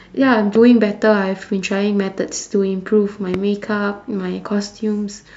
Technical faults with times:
0.55-0.58 loud pop
3.34-3.36 loud pop

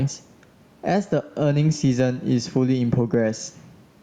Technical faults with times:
0.00-4.02 gain pumping

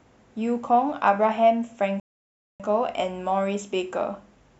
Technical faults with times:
2.00-2.60 rebuffering stall

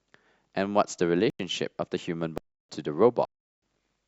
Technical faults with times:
1.30-1.39 block of digital silence
2.38-2.69 block of digital silence
3.25-3.62 block of digital silence

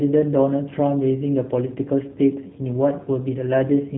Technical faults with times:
0.00-3.98 G.729 codec

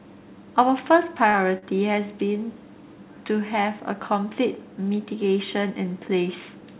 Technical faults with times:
1.30-1.64 short concealed packet loss

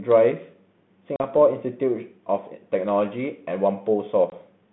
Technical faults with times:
1.16-1.24 packet loss on an ADPCM call
4.30-4.33 packet loss on an ADPCM call

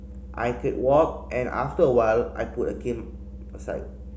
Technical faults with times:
none

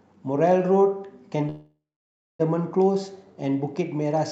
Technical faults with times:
1.49-2.41 call audio freeze

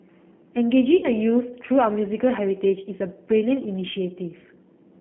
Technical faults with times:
0.00-5.01 G.729 codec
0.97-1.08 VoIP packet loss concealed by the speech codec

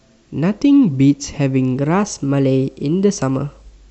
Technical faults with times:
1.76-3.73 drift correction step

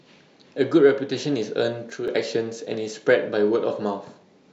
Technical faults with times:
1.90-2.08 one channel drops out

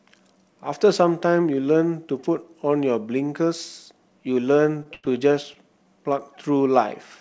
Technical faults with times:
4.83-5.15 repeated stalls (stutter)
5.53-5.58 short stall from a late packet

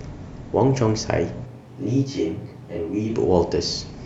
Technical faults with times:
1.47-3.08 switch to a distant microphone

